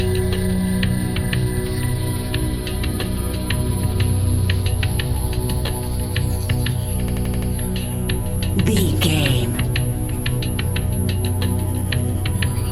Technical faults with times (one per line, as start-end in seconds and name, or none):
7.08-7.51 system hang loop